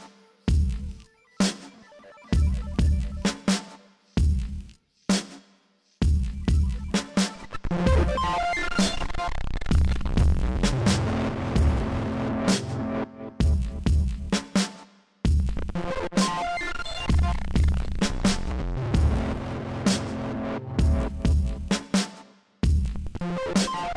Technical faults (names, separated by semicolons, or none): none